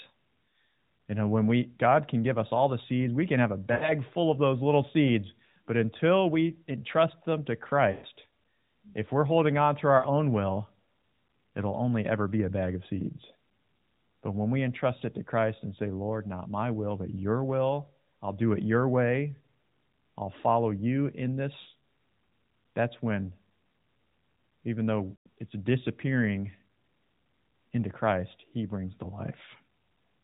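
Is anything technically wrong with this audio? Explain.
Yes. There are five lost AMR speech frames events: 3.72–3.93 s, 7.92–8.06 s just after "we entrust them to", 9.98–10.06 s, 21.62–21.67 s just after "I'll follow you in", and 25.12–25.27 s just before "it's disappearing". Each sounds like a smeared, fading warble, and the longest gaps of about 100 to 140 ms sag toward silence before the speech returns roughly. Corrupted frames forced the decoder to repeat the last good pitch and vocal-tract settings at decreasing gain, which is audible through the band-limited AMR narrowband mobile codec.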